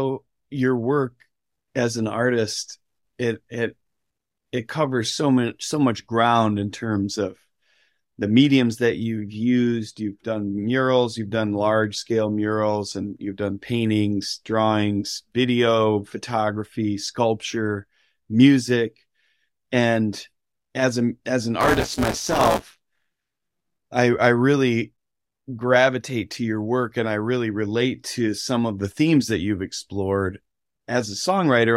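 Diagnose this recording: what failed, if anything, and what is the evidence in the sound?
At the driver and buffer stage, the program filling the ring buffer and the hardware reading it slipped into each other, causing buffer tearing from 21.61 to 23.76 s, between "as a as an" and "i i really". About a third of each period replays speech roughly 20 ms old, with hard joins, producing a robotic 172 Hz rattle that fits a 256-sample buffer.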